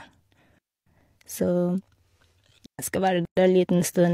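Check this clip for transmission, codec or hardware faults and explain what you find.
This speech clip contains two kinds of fault: two digital wireless dropouts and one gap at a join of encoded pieces.

The digital wireless dropouts run from 0.58 to 0.87 s, about 281 ms, and from 2.66 to 2.79 s, about 131 ms. Each time, the radio link lost more data than the receiver could conceal, so it muted with a very short fade. The result is a clean hole of near silence with no noise burst before or after. On a waveform the envelope collapses to a flat line. A spectrogram shows a blank vertical band across all frequencies with crisp edges.

The gap at a join of encoded pieces runs from 3.25 to 3.37 s. A silence of about 117 ms interrupts continuous speech, and the sound then resumes exactly where it left off. Two separately encoded pieces were joined without trimming, so the encoder's start-up delay and the padding in the previous piece's last frame remain as dead air. 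The waveform shows a flat stretch whose edges are softened. On the spectrogram it is an empty column with smearing at both boundaries.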